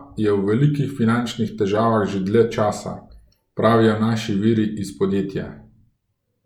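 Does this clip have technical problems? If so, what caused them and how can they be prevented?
No, nothing stood out on listening to this speech clip, so there is no cause to trace and nothing to prevent.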